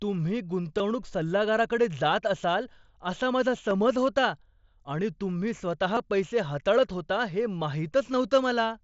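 At 0.78 s, 3.70 s and 5.95 s there are brief concealed Bluetooth headset packet losses, lasting 15 ms, 7.5 ms and 15 ms. The receiver bridged each gap by repeating a closely matching stretch of the preceding waveform, so the single lost frame at 3.70 s is nearly hidden, while the two-frame runs at 0.78 s and 5.95 s come through as a brief buzzy tone with a small warble where real audio returns.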